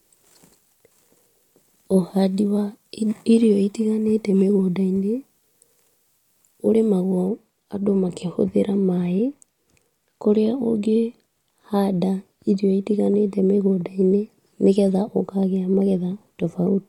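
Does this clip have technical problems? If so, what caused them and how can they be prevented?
Yes. From the start to about 7.3 s, pre-emphasis is left on: the speech sounds thin, bright and sibilant, about 8 dB hot at 10 kHz relative to 1 kHz. That fits a CD 50/15 µs boost that never got its matching de-emphasis. To prevent it, make sure playback honours the emphasis flag.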